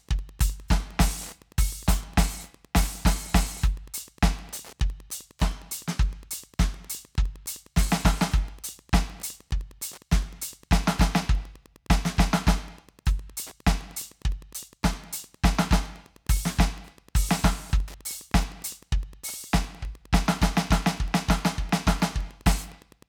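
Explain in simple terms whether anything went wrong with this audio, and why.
Something did go wrong. Wi-Fi interference runs through the whole music clip as a faint, steady ticking, about ten ticks a second. A nearby Wi-Fi radio sends a signal every 102.4 milliseconds. The audio circuit picks it up and turns it into sound.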